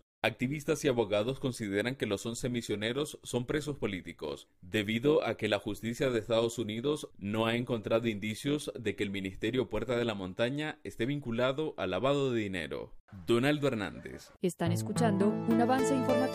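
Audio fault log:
0.00–10.32 s: overlap-add ripple. The level rises and falls by about 6 dB once per frame, roughly a hundred times a second, heard as a metallic buzz. The windowed frames were recombined with an overlap whose gains do not sum to a constant.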